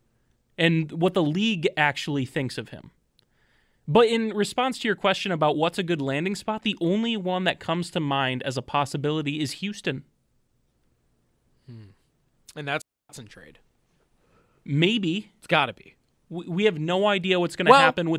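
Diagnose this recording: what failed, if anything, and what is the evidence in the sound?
The speech drops into a clean hole of near silence from 12.82 to 13.09 s, about 278 ms, a digital wireless dropout in the radio link. The receiver lost too much data and muted with a very fast fade. Unlike an analogue radio dropout, no noise burst comes before or after.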